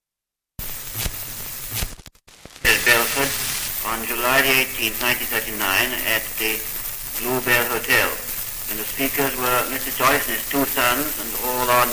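Nothing in the audio gives any sign of a technical fault, from the first moment to the last.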